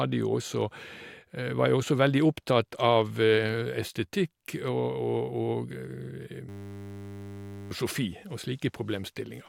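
At 6.49 s a system hang loop replaces the speech until 7.71 s. A froze while the hardware replayed one 10 ms buffer, giving a steady 100 Hz buzz and losing about a second of audio. The waveform repeats one identical cycle; the spectrogram shows flat harmonic lines spaced 100 Hz apart.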